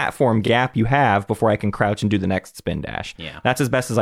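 A speech clip with one case of repeated frames. At 0.46 to 0.49 s, just before "you have before I", a 26 ms block of sound plays twice in a row. This is heard as a brief stutter. The length fits a single compressed frame being written or sent again, so the decoder plays the same slice of audio a second time. The repeat adds 26 ms to the clip's running time.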